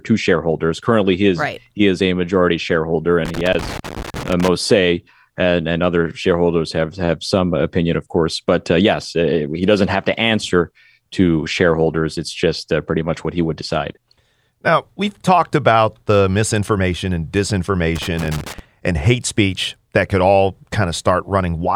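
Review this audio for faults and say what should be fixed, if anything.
Loose connector crackle appears twice in this speech: from 3.25 to 4.48 s, right after "is a majority shareholder" and before "say and and other", and from 17.96 to 18.59 s, just before "and hate speech that". A worn or dirty contact is making and breaking, chopping the signal into an irregular scratching burst. On the waveform this shows as jagged dropouts and sharp spikes; on a spectrogram, as scattered broadband vertical streaks. Clean or replace the suspect cable and connectors, and strain-relieve them so they cannot shift during recording.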